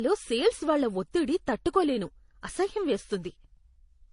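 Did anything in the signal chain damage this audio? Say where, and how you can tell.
Yes. Throughout the speech, nothing reaches above 10.6 kHz, and two distinct kinds of codec smearing and swirl overlap. At the codec stage this is likely transcoding between lossy codecs, which fits a low-rate HE-AAC encode re-encoded to MP3 at about 40 kbit/s.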